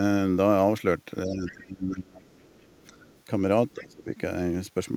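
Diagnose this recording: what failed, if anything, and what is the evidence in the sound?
Speech suppressed in double talk, at the call-processing stage. The speech drops by up to about 25 dB from 1.26 to 2.27 s, briefly from 2.87 to 2.97 s, and by about 15 dB from 3.75 to 4.1 s. The waveform envelope caves in and the spectrogram's upper bands thin. The likely cause is an echo canceller turning down both talkers while they overlapped.

The other side's voice leaking through, also in call processing. Faint second speech sits beneath the talker at 1.46 to 1.52 s (about 20 dB down), 2.39 to 3.21 s (about 35 dB down) and 3.72 to 3.83 s (about 25 dB down). It shows as weak, independent harmonic traces on the spectrogram, likely residual loudspeaker echo that the canceller left behind.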